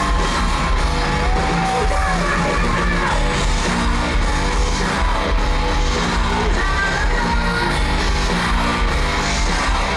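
From 2.07 to 6.31 s a regular train of clicks ticks at about 7.6 per second, roughly thirty pulses as loud as the audio, likely from electrical interference or a faulty connection or power supply.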